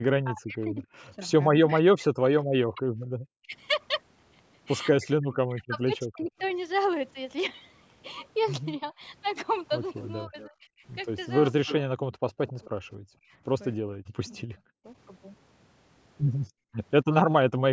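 From 0.23 to 6.31 s the speech keeps dipping and breaking up, about 3 s in all, at worst roughly 40 dB down. This is speech suppressed in double talk. Both sides were likely talking at once. The echo canceller could not tell its own talker from loudspeaker echo, so it turned everything down.

From 3.11 to 3.15 s the room sound drops out abruptly, by about 40 dB. This is background gated by the echo canceller. It clamped the microphone while the loudspeaker played, then let go.

From 6.3 to 6.52 s a very faint delayed copy of the voice appears, 246 ms late. This is echo leak. One side's canceller likely left some loudspeaker pickup in its microphone signal and sent it back.

From 8.79 to 14.86 s double-talk suppression returns, likely for the same reason. The speech is cut in pieces, about 1 s in total, again at worst around 40 dB down.

Within that stretch, from 10.0 to 12.7 s, a stronger echo leak runs alongside. 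The returned copy arrives 266 ms late and sits only moderately below the speech.

From 16.49 to 16.76 s the background gates out again, about 0.3 s, by about 40 dB.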